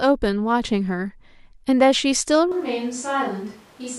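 At 2.52 s the speech turns suddenly roomy and hollow until the end, likely a switch to a distant microphone. The waveform steps down about 10 dB, and the spectrogram shows thinner bass, smeared reverberant tails and a raised noise floor about 25 dB below the speech.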